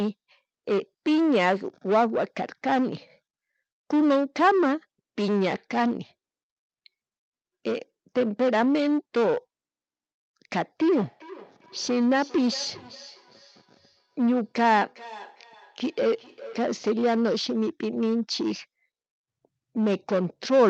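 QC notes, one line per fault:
10.82–16.88 s: feedback echo between two devices. Sound recurs every roughly 0.4 s, thinning and ringing more each pass, peaking about 19 dB below the speech. A nearby device replays into an uncancelled microphone; single room echo returns once, not repeatedly.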